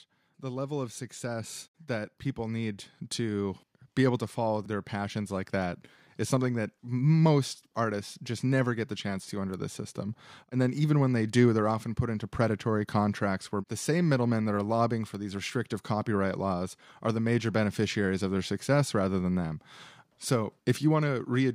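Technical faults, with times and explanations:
0.41 to 12.35 s, automatic gain rising: the level of the speech climbs steadily by about 11 dB over nearly twelve seconds, and the background noise floor lifts right along with it. The automatic gain control judged the incoming signal too quiet and kept nudging its gain upward in slow increments rather than in one step, so the whole mix swells gradually instead of jumping, with voice and room sound growing louder together.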